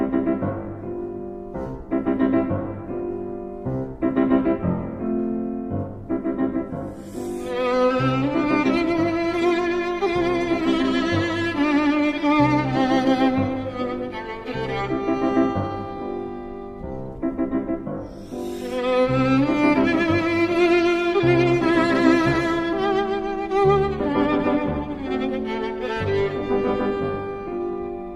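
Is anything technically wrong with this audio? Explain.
No, nothing technically wrong can be heard anywhere in this audio.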